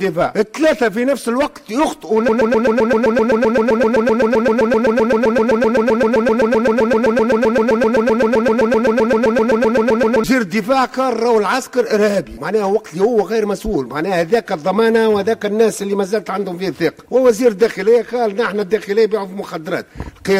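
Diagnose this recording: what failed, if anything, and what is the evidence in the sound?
A broken-record loop runs from 2.29 s to 10.24 s: a 129 ms fragment repeats exactly, back to back, some sixty times, and the intended audio for that span is lost. The likely cause is a stalled playback or streaming buffer that kept re-sending its last fragment.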